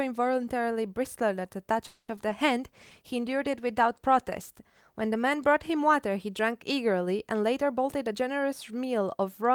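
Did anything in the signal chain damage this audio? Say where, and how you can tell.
Yes. In the network path, a call audio freeze from 1.87 to 2.10 s was likely caused by delayed packets draining the jitter buffer. The last sound is stretched into a fading fill, adding a 210 ms gap with nothing lost.

Also in the network, short concealed packet loss occurs at 2.16, 2.21 and 2.29 s. Missing packets were patched by extrapolation, heard as brief smears or wobbles.

At the codec, a call bitrate drop from 32 to 18 kbps lasts from 2.59 to 5.93 s. Coarser Opus coding makes the audio rougher and duller until recovery.

In the jitter buffer, a speed-up from 7.49 to 9.50 s removes pitch-period slices, about 150 ms in all. The audio plays roughly 8% faster at unchanged pitch and sounds hurried.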